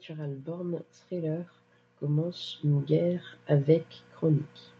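From 0.06 s to 4.52 s the speech and its background swell upward together, ending about 15 dB louder than they began. This is automatic gain rising: the gain control judged the input too quiet and steadily raised its amplification across the whole passage.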